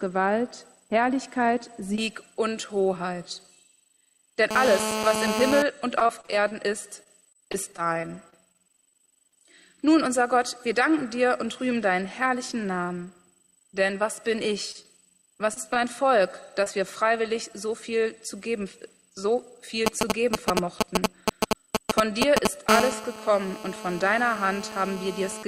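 GSM phone buzz, 4.51 to 5.62 s: a nearby 2G phone in a call transmits 217 radio bursts per second, and the audio circuitry rectifies them. The result is a hard, raspy 217 Hz buzz full of harmonics, only about 2 dB below the wanted signal and unrelated to it.

Repeated packet loss (robotic sound), 5.99 to 9.33 s: 20 separate holes, totalling 320 ms and none longer than 32 ms, were each patched by extending the preceding sound. About a tenth of the stretch is filled-in material, giving a choppy, robotic quality with fragments missing.

Jitter buffer slow-down, 7.46 to 10.09 s, overlapping the losses: the receiver's buffer ran short or had raised its target delay, so it rebuilt its reserve by repeating single pitch periods, adding 97 ms. Playback drops to 96% speed with unchanged pitch, so the audio sounds slightly drawn out.

Scattered short gaps, 14.72 to 16.68 s: roughly five isolated late or lost packets, about 80 ms missing in all and the longest around 30 ms, were each bridged by continuing the last sound. 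Between them the audio stays clear, broken only by brief ticks and hiccups.

GSM signalling bursts, 19.86 to 22.70 s: the phone sends only short groups of 217 Hz radio bursts, as when a call or text is arriving, and the rectified pulses form a galloping dit-dit-dit of ticks and brief buzzes, roughly 5 dB louder than the signal.

GSM phone buzz returns from 22.70 to 25.43 s as the phone settles into a call, again a continuous rasping 217 Hz buzz, now about 7 dB below the signal.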